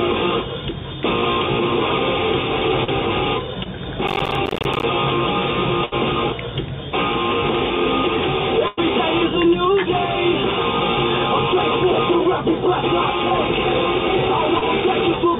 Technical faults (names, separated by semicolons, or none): short concealed packet loss; processor overload crackle; burst of packet loss